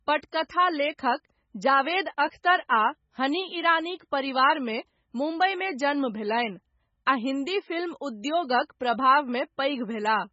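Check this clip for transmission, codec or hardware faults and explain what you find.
Throughout the speech, nothing survives above 7.6 kHz and weak frequency lines flicker between frames, giving a watery swirl and metallic s sounds. Heavy MP3 compression, at a bitrate near 16 kbps, is the likely cause. A plain low-pass filter would dull the top without that warble.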